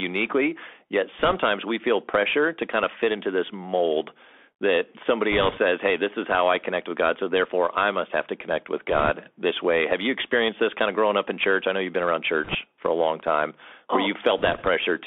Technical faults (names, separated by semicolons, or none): Bluetooth CVSD headset codec; bit errors on a Bluetooth voice link